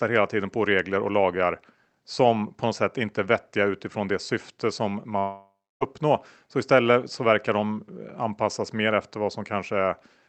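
After "utifrån det syfte som", from 5.19 to 5.83 s, the speech is lost, likely to a long network dropout. About 0.6 s never arrived. A fading buzz fills in, then roughly 0.3 s of near-silence follows. A spectrogram shows smeared harmonics decaying into a dark gap, and the waveform flattens before speech resumes.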